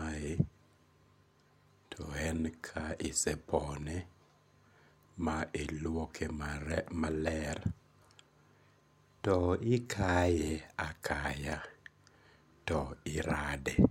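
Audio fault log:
No faults detected in the speech on this pass; nothing to log.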